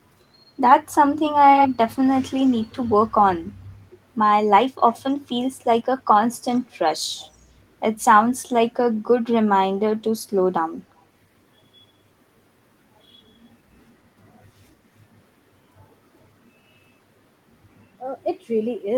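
An echo canceller at a loudspeaker end likely failed to remove what its microphone picked up, so this speech returns as echo leak, a copy trailing the original by 133 ms. The first burst, 1.57 to 1.69 s, is about as loud as the speech itself. Fainter scraps follow at 2.37 to 2.76 s and 4.92 to 5.12 s, then fainter ones still at 6.55 to 6.75 s and 7.19 to 7.36 s. Each sounds like a brief, quick repeat of the voice.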